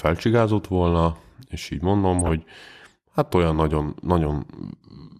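DAB burbling hits this speech clip from 2.19 to 2.31 s, a brief disturbance over the talker. Weak reception lets bit errors, at a rate of a few tenths of a percent, slip past the error correction into the MP2 audio data. Corrupted samples then put short blips of noise in single sub-bands, and corrupted scale factors throw sub-bands up or down in level for up to a frame. The 0.12 s span fits roughly six damaged frames in a row.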